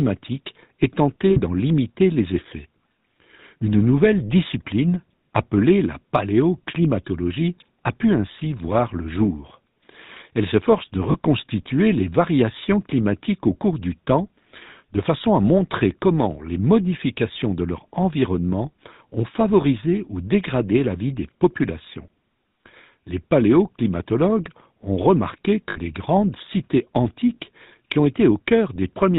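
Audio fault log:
throughout: GSM full-rate codec. Buzzy, gravelly speech with nothing above 4 kHz, which fits the 13 kbps pulse-excited coder simplifying the excitation.
1.3–1.4 s: lost GSM frames. About 60 ms of missing audio filled by repeating the last good frame, so a brief metallic ring just before "limiter les effets".
11.12–11.15 s: lost GSM frames. A short 20 ms gap patched by the decoder repeating the previous frame, heard as a tiny rough ring right after "s'efforce de".
25.7–25.78 s: lost GSM frames. Another 60 ms concealment, a metallic smear between "paléoclimatologues ont remarqué" and "grandes cités antiques qui".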